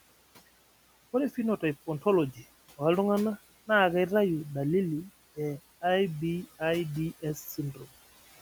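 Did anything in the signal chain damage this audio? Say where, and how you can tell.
Yes. In the call-processing stage, a noise suppressor causes noise suppressor artifacts throughout the clip. It pulls the room noise, which sits about 20 dB below the speech, down by about 17 dB between phrases. Frame-by-frame gain changes leave the residue rising and sinking under the speech.

The same suppressor also causes speech cut by the noise suppressor from 7.75 to 7.86 s. It mistook low-level speech for noise and turned it down by up to about 10 dB for roughly a tenth of a second, so that stretch sounds faint and swallowed.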